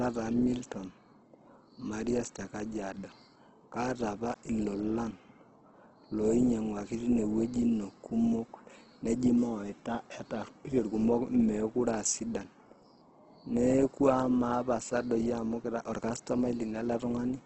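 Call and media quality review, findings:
Opus compression, full clip: speech grainy and rough, top end missing, nothing above 8.1 kHz. Likely Opus in CELT music mode at a low rate, consistent with roughly 12 kbps: bands refilled with folded or noise content, bandwidth cut to wideband.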